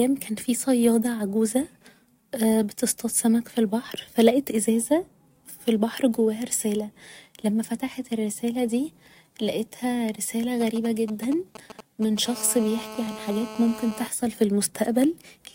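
A 2G phone close to the recording chain starts its pre-call exchange just after "فتحت الرسالة دي لقيتها", producing GSM signalling bursts from 10.61 to 12.26 s. The audio circuitry rectifies those isolated radio bursts, so instead of a continuous tone there is a galloping dit-dit-dit of brief buzzes pulsing at the 217 Hz frame rate. They sit roughly 15 dB under the speech.

At 12.26 s the phone settles into an active call and transmits in bursts 217 times a second. This produces a GSM phone buzz lasting until 14.07 s. Every pulse is rectified and heard, giving a steady, hard, raspy buzz at 217 Hz, rich in harmonics and unrelated to the speech. It sits at about 14 dB below the speech.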